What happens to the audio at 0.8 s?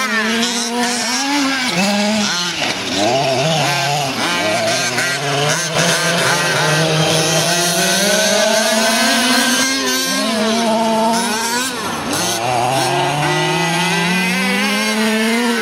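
Nothing goes wrong at 0.8 s; the audio plays through that moment intact, with no dropout, click or distortion.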